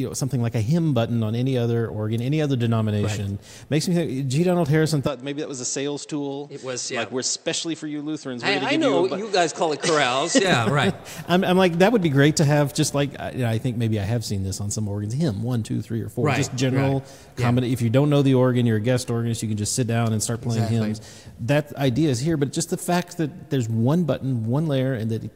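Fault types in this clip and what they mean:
Input switched to a poorer device: From 5.07 to 10.45 s the sound turns duller and about 5 dB quieter. Nothing passes above 8.4 kHz, and a faint new background noise appears. There is no gap at either change. A likely switch to another microphone explains it.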